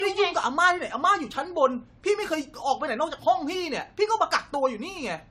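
Throughout the speech, repeated lossy re-encoding, likely about seven passes through a chain consistent with AAC-LC near 96 kbit/s, causes generation loss. Each pass requantises on a shifted frame grid, so swirl, smearing and hollowness accumulate, consonant attacks blur, and nothing remains above 16.5 kHz.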